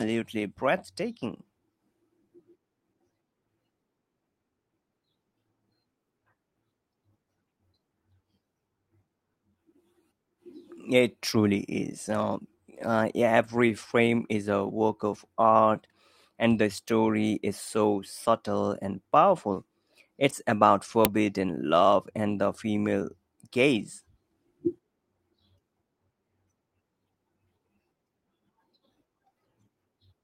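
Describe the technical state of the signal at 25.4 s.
At 25.4 s the speech signal is intact, with no audible technical fault at that moment.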